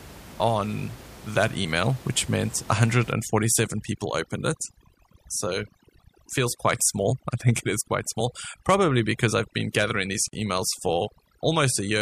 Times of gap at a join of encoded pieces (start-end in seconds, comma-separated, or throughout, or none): 10.28-10.33